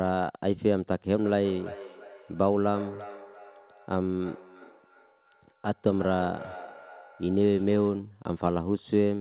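From 1.16 s to 8.16 s, each phrase comes back as a thinner, ringing copy about 300 ms later, peaking at about 16 dB below the speech. This is feedback echo between two devices: one device in the room plays the far end's audio, and a second device's microphone picks it up and sends it back into the call. That device's echo canceller only removes its own playback. The whole clip is band-limited to 4 kHz, as in a telephone-band call.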